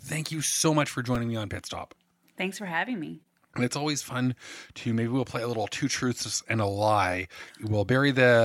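At 1.15 s, after "you so much for", a repeated buffer: late audio made the device replay a tiny piece, fitting a 5 ms buffer. It sounds as a click, not a silent gap.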